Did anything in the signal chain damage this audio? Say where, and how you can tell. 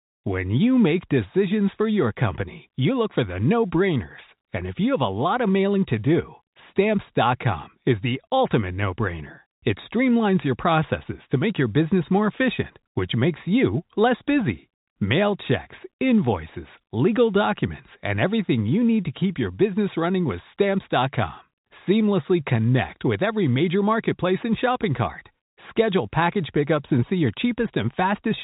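No, the chain caused no damage.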